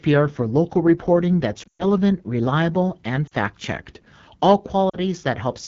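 The whole clip carries AMR wideband (HD Voice) codec damage. The speech sounds rough and raspy, which fits a low rate near 8.85 kbit/s. The content above 6.4 kHz is synthetic noise, not real detail.

Lost AMR speech frames follow. From 1.63 to 1.84 s, after "for local reporting", about 140 ms drops out, with a 120 ms run. The sound drops to near silence before "reliable and". Shorter 40 ms dips come at 3.27 s and 4.90 s.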